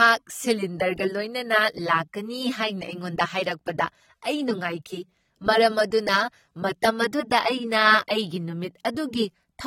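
A low-bitrate encoding was likely re-saved as a high-bitrate MP3. From start to end the speech has nothing above 16.6 kHz and keeps the artefacts of the first pass, which fits a source around 32 kbit/s. The larger file restores none of it.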